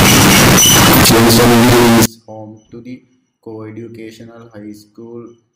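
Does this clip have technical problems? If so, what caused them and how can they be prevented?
Yes. From 0.00 to 2.06 s the speech becomes very loud, harsh distortion. Quiet moments are as loud as the rest. The likely cause is signed and unsigned mixed up. The 16-bit samples were read with the wrong sign convention. That flips the top bit, so every zero crossing jumps across the full range. To prevent it, declare the sample format explicitly and check it at every conversion step.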